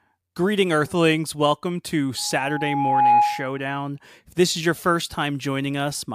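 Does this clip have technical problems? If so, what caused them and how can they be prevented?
Yes. From 2.17 to 3.61 s there is loudspeaker feedback squeal: the microphone picks up its loudspeaker, loop gain exceeds one at 831 Hz, and that tone swells over about a second to about 10 dB above the speech. Reducing gain, repositioning the microphone or notching 831 Hz prevents it.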